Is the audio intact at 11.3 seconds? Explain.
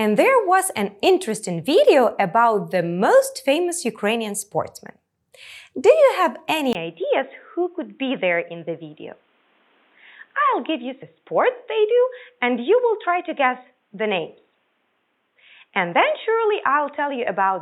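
No. From 6.73 s to the end, the sound loses everything above 3.8 kHz, drops about 5 dB and gains a new noise floor well below it, after a 20 ms gap. The likely cause is an input switched to a poorer, narrower-band device.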